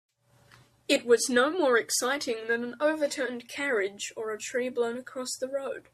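Speech recording, no technical faults detected.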